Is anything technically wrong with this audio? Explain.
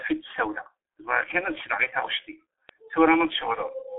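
Yes. From start to finish the speech sounds muffled, hoarse and thin, with consonants smeared together and no brightness above about 3.7 kHz. This is the G.723.1 codec, an early internet-telephony coder. It confines the sound to a telephone band of roughly 300 Hz to 3.5 kHz and rebuilds the voice from a coarse model updated only every 30 ms. The heavy damage points to a bitrate around 6.3 kbit/s.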